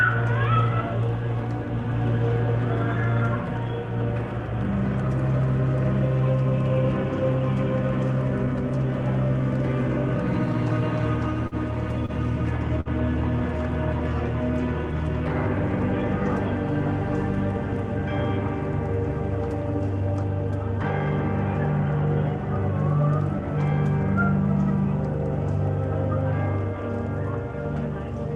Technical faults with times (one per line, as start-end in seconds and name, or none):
11.47-11.55 short stall from a late packet
12.06-12.11 short stall from a late packet
12.80-12.89 short stall from a late packet